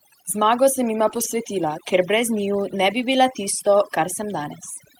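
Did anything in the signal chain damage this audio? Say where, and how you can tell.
Yes. Overdone noise removal at the call-processing stage affects the whole clip. The background drops to near silence dotted with twinkling specks. The suppressor is gating individual frequency bands close to its noise estimate, taking quiet speech components with them.

A lost packet rebuilt from error correction shows at the network and codec stage from 1.07 to 1.25 s, right after "sem jima". There is no gap, but that stretch turns rougher and noisier, which points to several lost packets replaced by the decoder's low-bitrate in-band copies.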